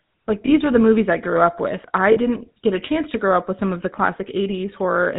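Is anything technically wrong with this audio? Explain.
Yes. The whole clip of speech carries GSM full-rate codec damage, plainly audible and consistent with the 13 kbps GSM full-rate scheme. The codec rebuilds the voice from a vocal-tract model driven by sparse, regularly spaced pulses, which gives it a buzzy, gravelly roughness. On a spectrogram, nothing appears above 4 kHz, and the harmonics look smeared and grainy.

Lost GSM frames occur at 0.46 to 0.50 s, just before "were the movies I", and at 2.12 to 2.18 s, between "grew up with I" and "get a chance to". These gaps fit one and two missing 20 ms frames. The decoder repeats the last good frame's settings, which produces a brief metallic ring. On a spectrogram, each gap shows frozen, repeated bands, and the waveform shows a short, held stretch.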